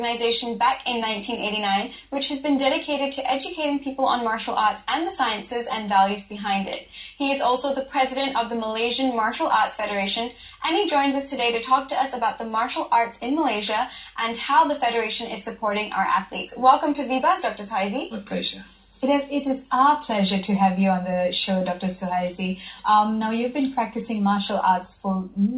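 Nothing stood out on listening, with the sound carried over a telephone-style call path that leaves nothing above 4 kHz.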